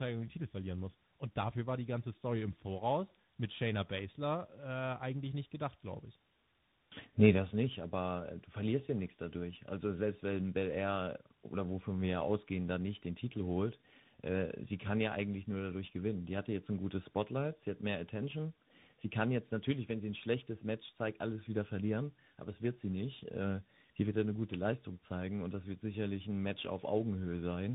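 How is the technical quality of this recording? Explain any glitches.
The quality is degraded throughout by tandem speech coding. For the whole clip, the call was decoded and re-encoded at each network border, with a CVSD-style stage compounding earlier narrowband coding. The speech sounds rough, muffled and warbly, with nothing above 3.8 kHz.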